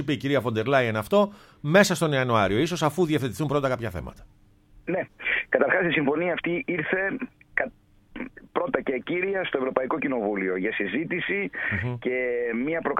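No technical faults detected.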